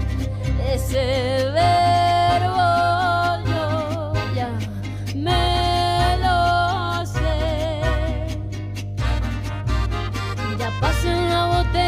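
A steady low drone sits under the audio from the first moment to the last, pitched at 50 Hz with some low harmonics above it, and it is loud, only a little quieter than the wanted sound itself. This is mains hum: the alternating current of the power supply has leaked into the signal path, most often through a ground loop between connected equipment or by induction from a nearby transformer.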